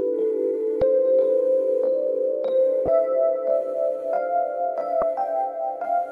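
Three short glitches interrupt the audio, at 0.79 to 0.82 s, 2.85 to 2.88 s and 4.99 to 5.03 s, each lasting roughly 30 ms. They are the mark of damaged data in a compressed stream: at those points some bytes of the encoded file were lost or overwritten, so the decoder misread the affected frames, lost sync and had to hunt for the next valid frame header before clean playback resumed.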